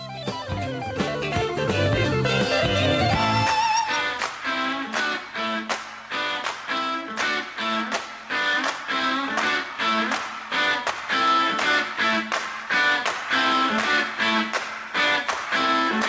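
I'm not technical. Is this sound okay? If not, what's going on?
No. All the way through, the level breathes in and out. This is gain pumping, and the likely cause is a recording level set far too high, with an automatic limiter constantly pulling it down. A noise gate would instead cut the background to silence in the gaps. Here, loud and soft parts end up closer in level, and everything sounds squashed.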